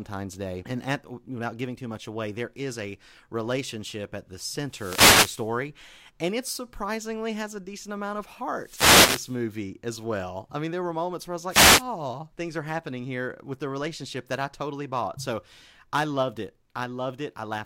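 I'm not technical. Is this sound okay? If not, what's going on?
No. A wireless microphone noise hit occurs at 4.62–5.57 s after "a relationship at the", at 8.55–9.43 s after "a decent amount of", and at 11.48–11.84 s after "moments where I was". Each time, the radio signal briefly faded, and hissing static swished over the speech.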